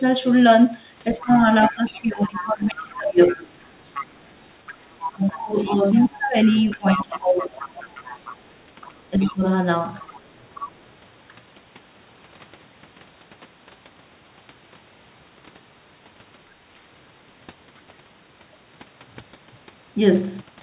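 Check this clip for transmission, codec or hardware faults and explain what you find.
The clip shows two echo-control faults, both confined to the first 11 seconds of the speech.

Other side's voice leaking through, 1.16 to 8.35 s, 9.20 to 9.34 s, 10.02 to 10.21 s and 10.56 to 10.72 s: a second voice sits roughly 15 to 25 dB under the talker, likely loudspeaker echo the canceller left behind.

Speech suppressed in double talk, at 1.19 to 1.34 s, 1.7 to 3.6 s, 5.11 to 7.98 s and 9.1 to 9.42 s: the talker dips by around 15 to 20 dB, likely the canceller turning both voices down during overlap.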